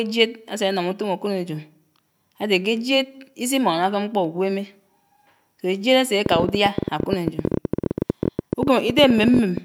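From 6.26 s to 9.58 s a train of clicks ticks over the speech, about 14.5 per second at an uneven pace, some fifty in all, well above the speech level. It likely comes from interference or a faulty connection or power supply. A waveform shows repeated sharp spikes, and a spectrogram shows thin vertical broadband lines.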